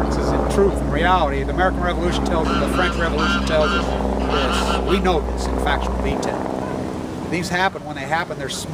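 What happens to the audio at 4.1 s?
At 4.1 s the signal path is picking up the power line, probably through a ground loop or a nearby transformer, so mains hum runs from 0.0 to 6.12 s. It is a steady 60 Hz tone with low harmonics, sitting only a little below the wanted sound.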